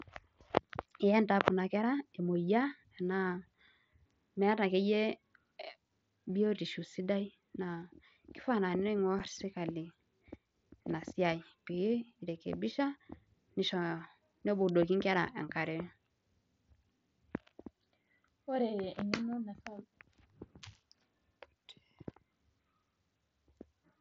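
At 9.19 s the speech drops out for about 7.5 ms. This is unconcealed Bluetooth headset packet loss, which fits a single lost voice packet between headset and phone. Nothing filled the gap, so the hole has hard edges.

At 14.69 s a sharp snap sits on top of the speech, lasting only a few milliseconds. It sounds like an electrical switching spike. A nearby switch or static discharge likely sent a brief arc into the audio line.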